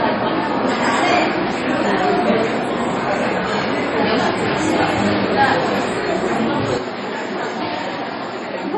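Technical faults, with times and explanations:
Throughout, MP3 compression: the audio carries nothing above 11.4 kHz and shows heavy coding damage, with a watery, swirling texture as weak frequency components drop in and out between frames and transients lose their sharpness. This is likely an MP3 encoder starved of bits, which fits a very low bitrate around 32 kbps. The encoder discards the top of the spectrum outright and zeroes whatever its hearing model judges least important.
6.78 to 8.77 s, input switched to a poorer device: with no gap at the changeover, the sound turns duller and narrower, now stopping at 7.6 kHz. It also drops by about 5 dB and gains a faint new noise floor roughly 50 dB below the signal. The likely cause is the system moving its capture to a lower-grade microphone or a headset call profile, whose limited bandwidth, lower gain and own self-noise replace the earlier input's character.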